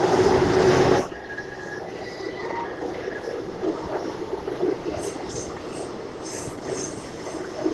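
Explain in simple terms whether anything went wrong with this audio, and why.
Nothing went wrong; these sounds carry no audible faults.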